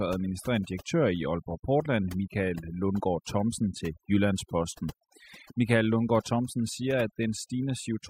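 Overdone noise removal runs through the whole clip: the noise reducer is set far too aggressively, so any frequency band sitting close to its noise estimate is pushed down or shut off, taking soft parts of the speech with it. The background drops and breaks up into flickering, chirpy fragments.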